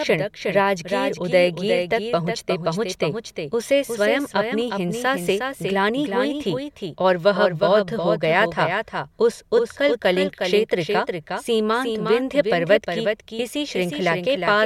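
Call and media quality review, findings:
Doubled audio track, throughout. Full-band second copy of the speech trailing by roughly 0.4 s, about 5 dB quieter, with no decay or room colour. Likely a second capture of the same signal through a slower path, mixed back in.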